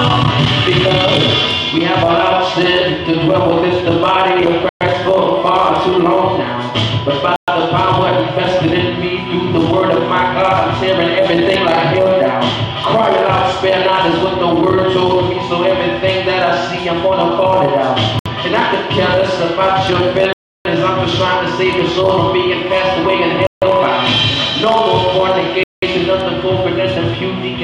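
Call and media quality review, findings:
Dropouts to full silence at 4.69 s (118 ms), 7.36 s (118 ms), 18.19 s (66 ms), 20.33 s (323 ms), 23.47 s (152 ms) and 25.63 s (191 ms); audio resumes abruptly after each gap. Pattern fits a Bluetooth stall, likely in the wireless playback link: radio interference delays packets, the headset buffer empties, and output halts until retransmitted packets arrive. Clustered in the second half, longest gap at 20.33 s.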